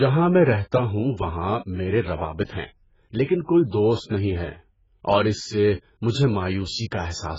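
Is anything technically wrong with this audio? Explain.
Yes, there are two problems. AAC compression runs through the whole speech clip. Nothing is left above 7.6 kHz, so the speech sounds dull and muffled, and sibilants and sustained sounds have a fizzy, watery smear. The likely cause is a low-rate AAC-LC encode. Its hearing model drops the upper band and coarsely quantises what remains, leaving gaps or noise-filled patches in the spectrum, which fits a bitrate around 12 kbps.

Pre-echo occurs twice, from 3.25 to 3.29 s and from 3.46 to 3.49 s. Each time, a short hiss comes just before a sharp onset and lasts about 39 ms the first time and 24 ms the second. The transform spreads its quantisation noise evenly across each block. When an attack lands late in a block, noise sized for the loud part leaks into the quiet gap before it, and the attack itself sounds blunted.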